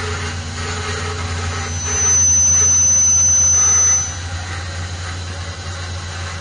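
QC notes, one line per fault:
Throughout, AAC compression: nothing sounds above about 9.7 kHz, so the top end is dull, and the damage is plainly audible as smeared detail with a warbling, fizzy texture on sustained parts. The likely cause is an AAC-LC encode at a low bitrate. Short of bits, the encoder drops the cut-off and quantises coarsely against its hearing model, leaving spectral holes that shift frame to frame, which fits something near 32 kbps.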